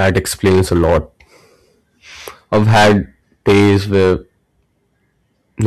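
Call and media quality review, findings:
Hard clipping on speech peaks, four spans: 0.00–0.98 s, 2.53–2.98 s, 3.48–4.13 s, 5.65–5.67 s. Harsh fuzz on loud syllables, worst at 2.53–2.98 s (about 20 dB overdrive), about 11 dB in the first and third spans, about 8 dB at the end. Probable component: capture gain stage or converter. Peaks exceed the stage's ceiling, get flattened, and the squared-off tops add high harmonics.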